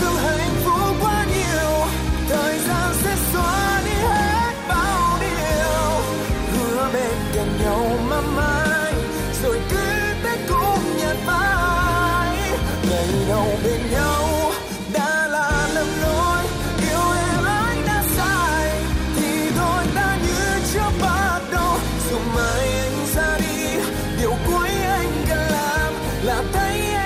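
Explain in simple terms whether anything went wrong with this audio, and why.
The audio was likely squeezed too hard by an older broadcast-style format, MP2 compression, and the damage is plainly audible from start to finish. This format splits the sound into many narrow slices of pitch and shares out a limited budget of detail among them. Too little budget means the highest slices get switched off, while the rest are stored roughly. The result is dull, muffled audio with a gurgling, grainy texture that comes and goes.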